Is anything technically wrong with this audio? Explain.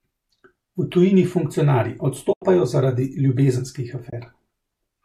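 Yes. The speech has two dropouts, both AAC frame loss with muting. The first runs from 2.33 to 2.42 s and the second from 4.10 to 4.13 s. The first hole lasts about 90 ms, which fits nine lost 10 ms frames of a low-delay codec, likely AAC-ELD. The second lasts about 30 ms. In both, the decoder had nothing to work with, so it zeroed the spectrum for the missing frames. The overlapping windows then fade the sound down and back up instead of cutting it, so each gap is a soft-edged silence. On a spectrogram it appears as a clean vertical blank band across all frequencies. On the waveform the envelope tapers to flat and swells back.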